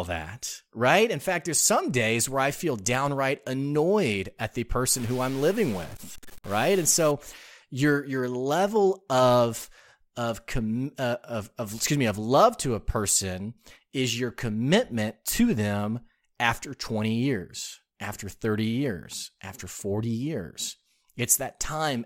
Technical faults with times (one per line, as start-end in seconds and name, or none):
4.91-7.11 stuck bit